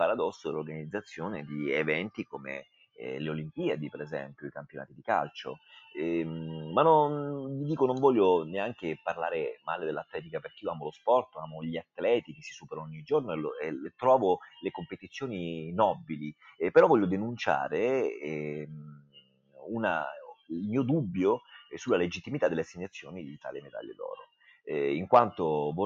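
A noise suppressor built for speech is applied to the music or sounds from start to finish. It treats sustained, steady material as noise and pulls it down, so the level rides up and down by roughly 5 dB. Attacks pass largely intact while held parts sag, which gives the sound a pumping, uneven quality.

The sound is also cut by the noise suppressor in eight separate places, where the gain reduction goes much deeper: 2.18 to 3.01 s (about 18 dB), 4.27 to 5.67 s (about 17 dB), 9.56 to 10.39 s (about 16 dB), 10.97 to 12.72 s (about 18 dB), 14.92 to 15.16 s (about 13 dB), 16.33 to 16.6 s (about 15 dB), 18.81 to 20.51 s (about 21 dB) and 23.02 to 24.67 s (about 18 dB). Within each span the attenuation is patchy rather than continuous. The most affected time in total is around a second, within the 18.81 to 20.51 s span. Sustained and decaying portions drop away or end early, while sudden onsets survive.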